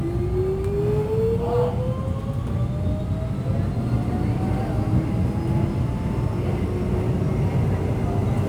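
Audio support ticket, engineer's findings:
Crude rate conversion, present throughout. Symptom: gritty, inharmonic fizz riding on loud and high-frequency content, with tones unrelated to the source. Error roughly 40 dB below signal. Probable component: resampler. Mechanism: nearest-sample picking with no anti-alias or interpolation filter, dropping samples in a fixed cycle. The pattern fits a 48 kHz to 44.1 kHz conversion. Fix: replace with a properly filtered polyphase resampler.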